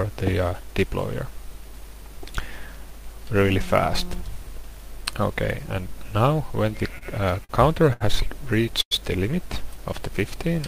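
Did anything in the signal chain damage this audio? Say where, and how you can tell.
Yes. Between 6.89 and 7.51 s, repeated stalls (stutter) at the network jitter buffer: four short holds, longest 48 ms, where playback ran dry and the last sound was stretched.

At 7.93 to 8.03 s, a short stall from a late packet: the sound is held for 74 ms with a slight buzz or dip, then resumes without loss.

At 8.81 to 8.93 s, a call audio freeze: the sound fades to about 70 ms of silence before continuing, likely packets held up in transit.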